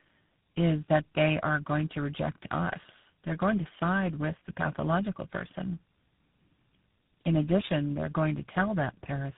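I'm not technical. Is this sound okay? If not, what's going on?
No. Tandem speech coding runs throughout: three phone speech coders in a row each re-squeezed the previous one's output, leaving the speech rough, muffled and warbly.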